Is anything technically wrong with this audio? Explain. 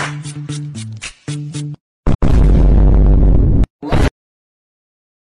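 Yes, there's a repeated-frames glitch. From 2.13 to 2.29 s, a 157 ms chunk of compressed frames gets played a second time, which fits about six frames. So you hear that bit of sound stutter, and the clip runs roughly 157 ms longer.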